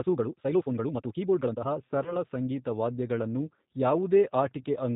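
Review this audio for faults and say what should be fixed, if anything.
G.729 codec damage runs throughout. The speech is rebuilt at 8 kbit/s from a filter and pulses, so nothing above 4 kHz survives and it sounds rough and synthetic. Use a wideband codec such as G.722 or Opus.

A time-stretched section runs from 0.0 to 1.7 s. The pace is rushed, about 1.75 times normal, while pitch holds. This likely comes from short pieces being dropped. Keep the original timing instead of squeezing audio to fit a length.

VoIP packet loss concealed by the speech codec occurs at 2.03 to 2.17 s. About 20 ms went missing, which fits a single lost packet. The decoder filled the gap from its last frame, and the sound stays weak or distorted until about 2.17 s. Add jitter buffering or forward error correction.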